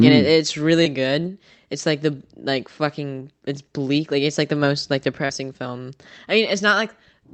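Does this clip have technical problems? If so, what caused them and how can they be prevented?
Yes. Short concealed packet loss occurs at 0.83–0.87 s, after "and it mm it's", and at 5.25–5.31 s, between "like the most like" and "film I". About 20 ms and 40 ms of audio never arrived in time, so the receiver extrapolated the preceding sound and crossfaded back. This shows as a briefly smeared, over-regular patch in the spectrogram with a slight kink in the waveform envelope. Preventing it means improving the network path, for example with a wired connection, less competing traffic and forward error correction enabled.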